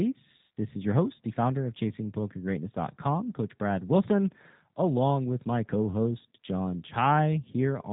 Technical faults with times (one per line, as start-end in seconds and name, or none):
0.00-7.92 G.729 codec